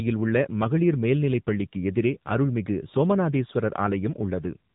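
The whole clip has passed through the AMR narrowband mobile codec at a low bitrate, about 7.4 kbps, cutting everything above 3.8 kHz and leaving the speech audibly buzzy and synthetic.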